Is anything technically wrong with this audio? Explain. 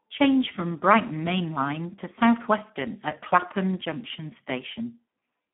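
Yes. Speex codec damage runs through the whole speech clip. The codec has too few bits for the excitation, which fits a low setting near 8 kbps. Speech sounds hoarse and noisy. The band is narrow, about 200 Hz to 3.4 kHz, with nothing above 3.8 kHz.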